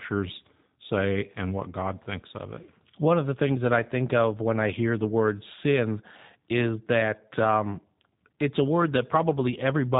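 From start to end the speech carries the sound of the G.729 codec, with plainly audible damage. The voice is rebuilt from a vocal tract filter, a pitch predictor and a few pulses per 10 ms frame, consistent with 8 kbit/s, so it comes out rough and slightly synthetic. Nothing passes above 3.8 kHz: a spectrogram shows a hard empty band there and blurred harmonics below, while the waveform looks coarse and pulse-driven.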